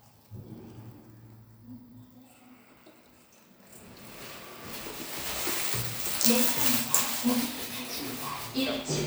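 No technical faults can be heard in this recording of sounds. Nothing in it calls for a time or a cause.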